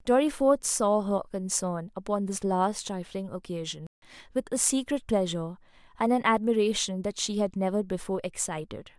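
At 3.87 s the speech cuts out abruptly and stays silent until 4.02 s, a gap of about 0.16 s, then continues. This is a playback stall: the player likely ran short of data or had its thread held up, so nothing reached the output until it caught up. On a waveform the signal drops to a flat line mid-phrase. A spectrogram shows a clean vertical band of empty frequency space with hard edges on both sides.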